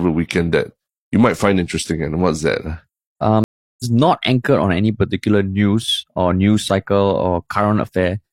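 A speech recording with a stream reconnect at 3.44 s: the audio drops to silence for 354 ms and resumes at 3.84 s about a third of a second further on, with that stretch skipped. On a spectrogram this shows as a blank vertical gap and then a faded-in, misaligned restart.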